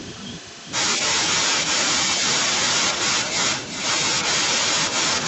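Speech from a call with echo and no canceller running the whole way through: every phrase returns about 8 dB quieter, roughly 0.4 s later, and thinner, because the far end's loudspeaker feeds back into its microphone and nothing removes it. The call codec's top-end cut-off sits at 8 kHz.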